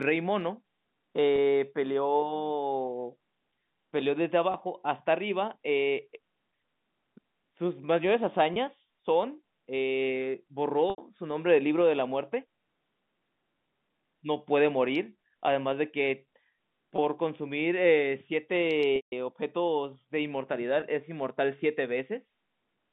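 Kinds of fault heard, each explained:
Packet loss with pitch repetition: the receiver bridges missing stretches of speech by looping the last pitch cycle and fading it out. Five 20 ms gaps sound like brief buzzy holds. The 80 ms gap at 10.9 s and the 160 ms gap at 18.96 s fade toward silence before speech cross-fades back in. A waveform shows identical repeated cycles under a decaying envelope. A spectrogram shows frozen, flat harmonic stripes that thin out below the 3.7 kHz telephone band edge.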